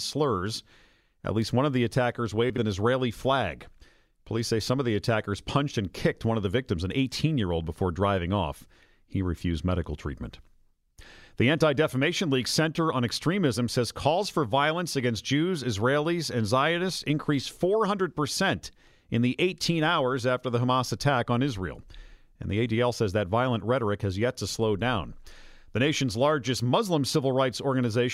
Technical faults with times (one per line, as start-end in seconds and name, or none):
2.50-2.58 chunks out of order